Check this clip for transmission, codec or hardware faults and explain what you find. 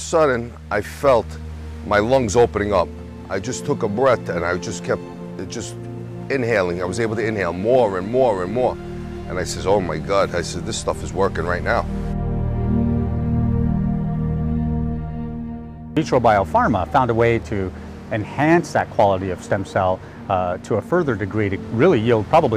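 No transmission, codec or hardware faults can be heard.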